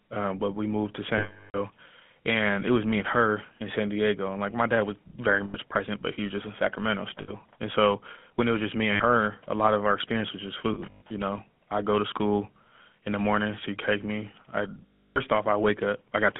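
Throughout, the speech passes through the GSM full-rate codec, which models the vocal tract and drives it with sparse, regularly spaced pulses. The result, consistent with a 13 kbps stream, is a plainly audible buzzy, gravelly roughness within a 200 Hz to 3.5 kHz line band.

Lost GSM frames are concealed by repeating the last good frame with falling level, which produces a rough metallic ring. This happens at 1.18 s after "but we moved to" for 360 ms, cut to silence near its end. It happens again at 5.44 s for 100 ms before "present but he was", at 7.22 s for 60 ms, and at 8.92 s for 80 ms. From 10.74 to 11.11 s the losses are scattered, totalling 240 ms, with the longest run around a tenth of a second. The last comes at 14.87 s after "cake me I" and lasts 300 ms.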